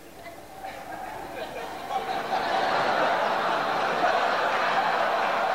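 From start to finish there's a grainy, gritty distortion riding on the sound, roughest in the quiet moments. It's likely low bit depth without dither: the grit sits roughly 30 dB under the signal, which fits truncation to about 7 bits, so the error tracks the sound itself.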